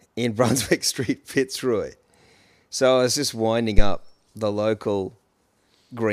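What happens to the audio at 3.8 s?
A phantom power thump hits from 3.78 to 4.02 s, between "I was just winding" and "the local". Switching the supply on or off on the live input sends a DC step through the coupling capacitors, giving a deep thump peaking near about -1 dBFS and decaying within 54 ms.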